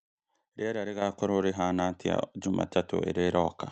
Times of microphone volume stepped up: 1.02, 2.04

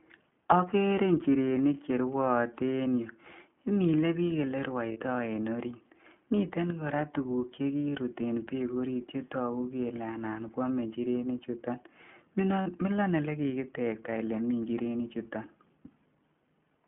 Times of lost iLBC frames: 4.92-4.98, 12.62-12.68

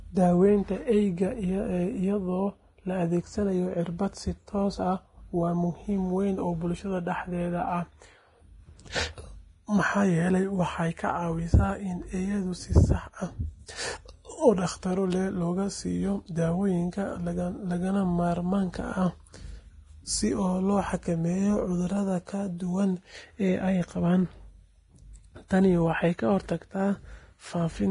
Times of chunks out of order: none

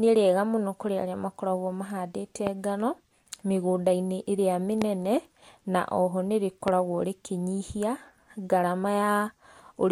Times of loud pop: 2.47-2.49, 4.82-4.84, 6.68-6.70

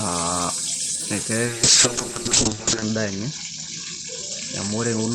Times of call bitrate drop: 1.47-5.14

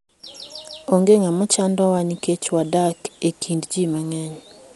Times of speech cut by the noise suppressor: none

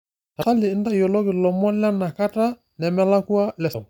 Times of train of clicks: none

